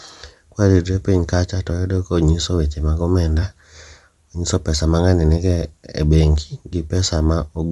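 Throughout, the speech has a breathy, grainy edge. The top of the spectrum sounds hissy and smeared instead of cleanly cut off as in narrowband telephony. This is likely Bluetooth LC3 compression filling zeroed bands with noise, which fits 7.5 ms frames near 48 kbps.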